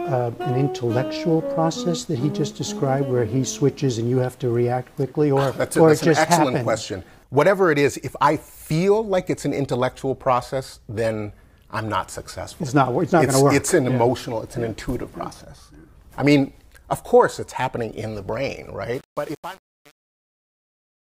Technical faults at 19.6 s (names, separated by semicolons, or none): truncation distortion on a fade